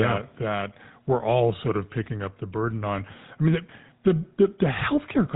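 GSM full-rate codec damage runs through the whole speech clip: the codec models the vocal tract and drives it with sparse, regularly spaced excitation pulses, giving a plainly audible buzzy, gravelly roughness, consistent with the 13 kbps full-rate coder, and nothing above 3.8 kHz.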